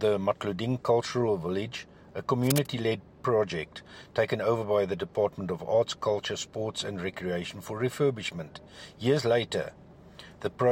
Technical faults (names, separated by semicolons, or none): cable scratch noise